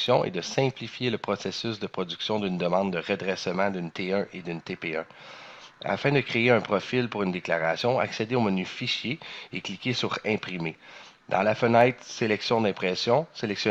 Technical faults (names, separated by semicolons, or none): none